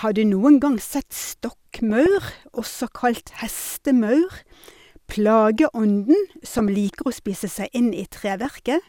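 DAB burbling breaks into the speech four times: 1.76 to 2.77 s, 4.33 to 4.40 s, 6.47 to 6.68 s, and 8.42 to 8.51 s. Bit errors from weak reception, a fraction of a percent, slip past error correction and corrupt MP2 sub-band samples and scale factors, so narrow bands lurch in level frame by frame. It sounds like short noisy blips in single sub-bands. On a spectrogram, isolated horizontal blocks flash bright or drop out, and the waveform shows jagged bursts.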